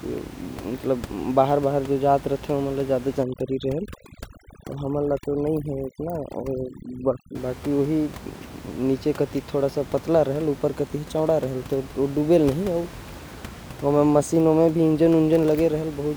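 From 3.23 to 7.35 s, overdone noise removal sets in: an aggressive suppressor, working against room noise sitting about 17 dB below the speech, mutes bands near its noise estimate. The gaps fall to near silence with twinkling specks. A spectrogram shows a blackened floor scattered with isolated bright dots, and speech harmonics with ragged, holed edges.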